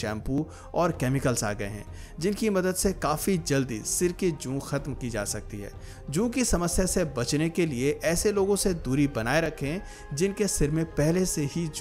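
The audio has two brief skips, at 0.38 s and 9.46 s. Each is a tiny jump forward, with no gap of silence. About a few milliseconds of sound goes missing each time. The likely cause is a dropped buffer (overrun), where samples were overwritten before being read.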